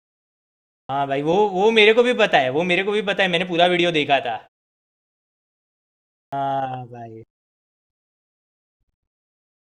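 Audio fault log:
0.84–0.89 s and 6.27–6.32 s: clipped start after a pause. About 52 ms and 55 ms of sound are lost after silences of 0.84 s and 1.87 s, while the output device wakes or re-locks, so each onset begins abruptly without its first sounds.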